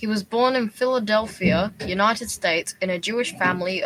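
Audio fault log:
No fault in this speech clip.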